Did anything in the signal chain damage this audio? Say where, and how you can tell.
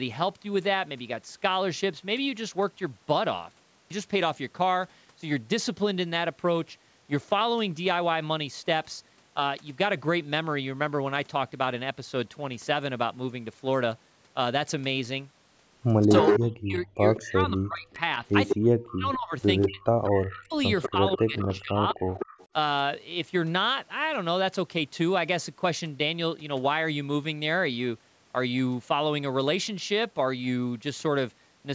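Yes. From 16.06 to 22.08 s the speech repeatedly dips, at worst by about 40 dB, for roughly 3 s in total. This is speech suppressed in double talk, likely from the call's echo canceller turning the near talker down while the other side spoke. Unlike packet-loss dropouts, the gaps follow the overlapping talk.

A separate echo leak appears at 16.09–16.45, 17.15–17.22, 18.31–18.55, 19.62–20.27 and 20.8–22.47 s. It is a delayed copy of the speech, 193 ms late, ranging from near speech level to about 20 dB below, likely left by a loudspeaker-side canceller. Room reverb would decay smoothly, but this repeats at a fixed lag.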